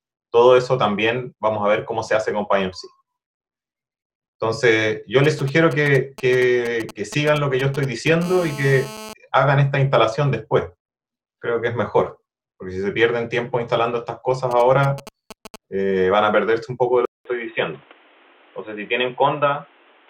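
From 5.24 to 8.23 s, GSM signalling bursts: a nearby 2G phone's intermittent radio bursts are rectified by the audio circuit, giving a galloping dit-dit-dit of short 217 Hz buzzes, roughly 15 dB under the signal.

From 8.24 to 9.13 s this becomes continuous GSM phone buzz as the phone enters a call: a hard, raspy 217 Hz buzz rich in harmonics, about 16 dB below the signal. The signalling bursts return from 14.51 to 15.56 s.

At 17.05 s a 200 ms dropout is followed by audio with nothing above 3.8 kHz and a new noise floor roughly 30 dB down, at essentially the same level. The input was likely switched to a poorer device.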